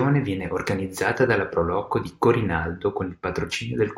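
No technical faults can be heard anywhere in the recording, so there is nothing to place on the timeline.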